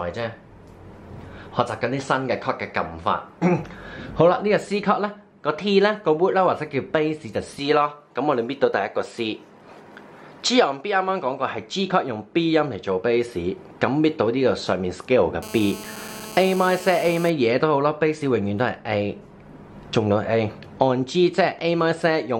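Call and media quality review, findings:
GSM phone buzz, 15.43–17.30 s: hard raspy buzz at 217 Hz, about 16 dB below signal. Audio circuitry rectifying 2G handset transmit bursts during a call. Spectrogram: steady comb of harmonics every 217 Hz; waveform: regular pulse train.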